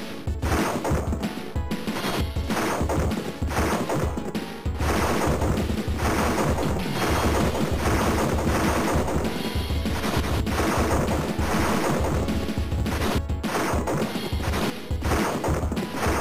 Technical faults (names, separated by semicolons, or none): doubled audio track